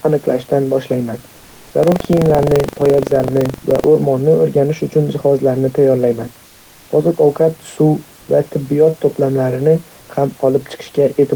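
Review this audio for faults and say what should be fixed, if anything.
From 1.79 to 3.87 s the writing and reading positions in the playback ring buffer slipped and crossed each period, producing buffer tearing. A small slice of each buffer, roughly a tenth of a second old, is spliced in with hard joins, giving a 23.4 Hz robotic rattle that fits a 2048-sample buffer. Keeping the writer safely ahead of the hardware read pointer, with enough headroom in the buffer, prevents this.

From 10.01 to 10.09 s, just after "va tibbiyot to'plamini", the sender likely stopped transmitting during the pause under discontinuous transmission, and the receiver filled 80 ms with comfort noise in place of the background. The real room noise, which sits about 32 to 34 dB below the speech, becomes a smooth, featureless hiss about 1 dB different in level. Turning off DTX, or tuning its voice detector so that short pauses keep the real background, avoids this swap.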